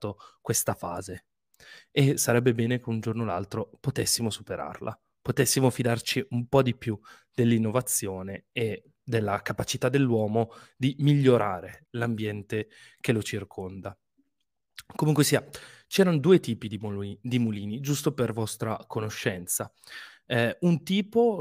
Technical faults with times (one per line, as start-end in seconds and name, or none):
none